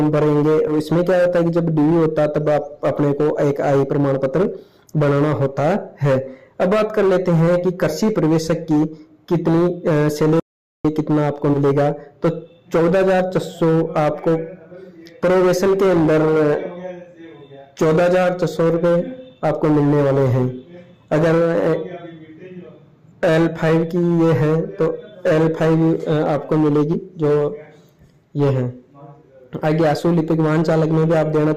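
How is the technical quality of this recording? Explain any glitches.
The recording has two kinds of glitch: three short skips where compressed frames went missing, and one stretch of total silence.

Compressed frames skipped at 0.67 to 0.73 s, 11.53 to 11.57 s and 26.93 s. At each point, whole blocks of encoded audio were never decoded. The sound jumps forward. The jumps fit 20 ms frames: roughly three frames, about 70 ms lost, at the first point, and two frames, about 40 ms, at each of the others.

An audio dropout to silence runs from 10.40 to 10.85 s, about 0.45 s in all. The sound cuts off mid-flow and returns just as abruptly. The gap is silent, with no room tone at all. That points to the input signal being lost, likely through a dropped connection or a momentary mute, while the recorder went on writing silence. Whatever happened during that half-second is gone.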